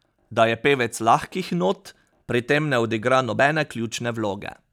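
No technical faults are audible.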